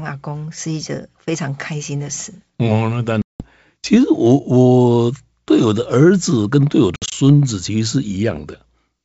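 From 3.22 to 3.46 s, packet loss on an ADPCM call cuts about 180 ms of speech, roughly ten packets, into a hard-edged silence. From 6.96 to 7.13 s, a few more gaps total about 100 ms, the longest 60 ms. Each gap throws the decoder's adaptive predictor out of step, so the speech returns with brief distortion.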